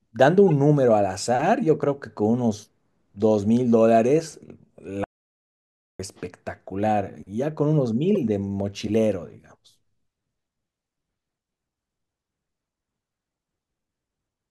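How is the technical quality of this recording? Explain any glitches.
The recording has three glitches: two brief decoding errors and one complete break in the signal.

At 0.48 s and again at 8.15 s there is a corrupt frame decoded. Flipped bits in the compressed stream reached the decoder, which played the damaged data anyway, so energy lands at the wrong frequencies. The first hits a couple of frames, peaking around -20 dBFS. The second spans about three frames and is louder, near -15 dBFS. Each is a short chirp or blip lasting only about as long as the damaged frames. Unlike a click from a sample-level discontinuity, it comes from energy misplaced in frequency.

From 5.04 to 5.99 s there is an audio dropout to silence of about 0.95 s. The speech stops mid-flow and returns abruptly, and the gap is silent with no room tone. That missing background is what separates it from a natural pause or a noise gate closing. 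The likely cause is the input being lost, from a disconnected device or a failed link, while the recorder kept writing silence. Whatever was said during that second is gone.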